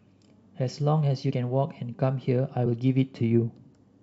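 At 1.30 s the speech jumps forward by about two compressed frames of 23.2 ms each, around 50 ms of audio lost. These compressed frames were skipped, not muted, so there is no silent gap.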